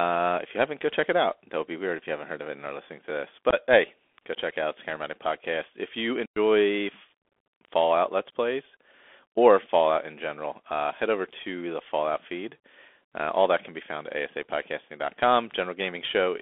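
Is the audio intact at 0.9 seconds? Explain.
No. At 0.9 s, as across the whole clip, the speech is carried by a Bluetooth CVSD headset codec. Its one-bit up-or-down steps with an adaptive step size leave a band of roughly 250 Hz to 3.5 kHz, with scratchy s sounds and a granular hiss. A spectrogram shows a hard ceiling near 3.5 kHz, and the waveform looks grainy.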